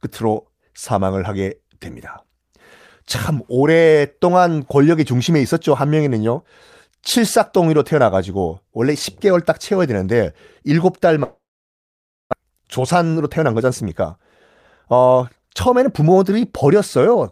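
Speech runs normally until 11.23 s, when the sound stops being fresh and turns into a fading buzzy continuation of the last sound that sinks to near silence, about 920 ms of it, before the talk resumes at 12.35 s with roughly 600 ms of material simply gone. The likely cause is a long network dropout. Unlike a brief packet loss that is smoothly patched, this gap is long enough for the concealment to give out, and the speech skips ahead afterward instead of picking up where it left off. The stall also leaves around half a second of extra delay built up, and the receiver's jitter buffer then speeds up to work it off. From 12.43 to 14.20 s the speech plays at about 109% of normal rate, shedding around 150 ms, and from 14.85 to 17.16 s at about 113%, shedding around 300 ms, by cutting out tiny pitch-period-sized slices. Because the pitch stays the same, this sounds hurried rather than chipmunk-like, which separates it from a simple resampling speed-up.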